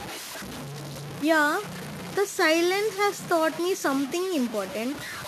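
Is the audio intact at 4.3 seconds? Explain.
No. At 4.3 seconds, as throughout the clip, the speech carries a grainy, signal-following distortion from low bit depth without dither. This likely comes from truncation to about 5 bits, leaving error only about 15 dB below the speech, so quiet passages turn gritty.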